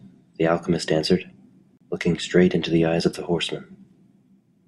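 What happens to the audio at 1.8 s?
Right there the speech drops out for about 32 ms, from 1.77 to 1.81 s, and that's a gap between stream segments. Two consecutive chunks of the stream don't quite butt up against each other in their timestamps, so the player pads the missing stretch with silence. You hear a brief, clean hole with abrupt edges, like a tiny hiccup in the flow. Nothing is actually cut from the speech; everything after it just arrives that little bit later.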